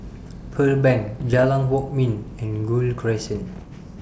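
Bit errors on an ADPCM link break into this speech clip from 1.18 to 1.45 s and again from 3.50 to 3.65 s, heard as pops and rough, gritty bursts with brief jumps in level. Bits are being flipped at a rate of roughly half a percent or a little more. Each flipped bit throws off the decoder's step size and prediction, so the damage rings on for several milliseconds instead of staying a single click. The G.722 wideband coding underneath carries the speech cleanly up to about 7 kHz.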